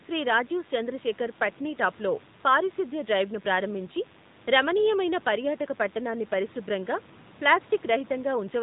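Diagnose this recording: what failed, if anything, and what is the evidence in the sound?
DECT cordless phone buzz runs through the whole recording, a thin, steady 100 Hz buzz with a dense ladder of harmonics, roughly 30 dB under the speech. It enters at the analogue wiring stage: a nearby DECT handset or base transmits a burst every 10 ms, and the audio circuitry rectifies it into sound.

AMR narrowband mobile codec damage is plainly audible throughout. Nothing above 3.8 kHz survives, and the speech has a buzzy, synthetic edge that suggests a mid-rate mode around 10 kbps. At the codec stage, a vocal tract model is driven by a pitch predictor and a few pulses per 5 ms subframe. The room noise, lying about 30 dB below the speech, comes through with the recording.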